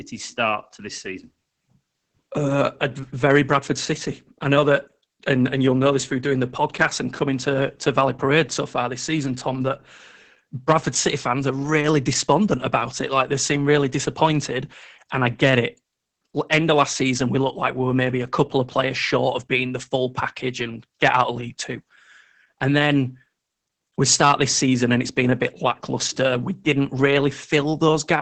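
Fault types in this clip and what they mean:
Opus voice compression: speech throughout stops at 8 kHz and sounds hoarse and slightly robotic, not just dull like plain filtering, pointing to SILK near 10 kbps.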